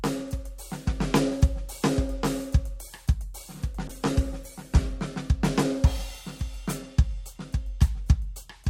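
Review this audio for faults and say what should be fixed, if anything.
Call bitrate drop, 3.88 to 5.07 s: a falling bandwidth estimate cut the encoder from 128 to 20 kbps, leaving the music coarse and dull. Set a bitrate floor and smooth the rate changes so that a short bandwidth dip doesn't push the encoder this low.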